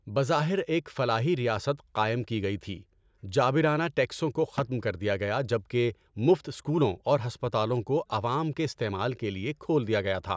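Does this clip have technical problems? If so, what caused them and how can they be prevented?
No, no technical faults here.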